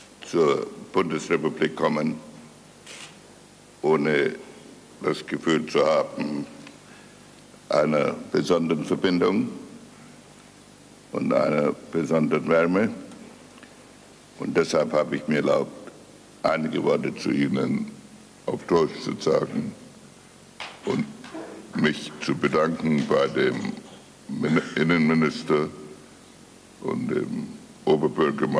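A wrong sample rate affects the audio from 17.11 s to the end: playback runs at about 0.92 times normal speed and roughly 1.5 semitones lower in pitch, which fits material recorded at 24 kHz being played at 22 kHz without conversion, slowing and lowering it together.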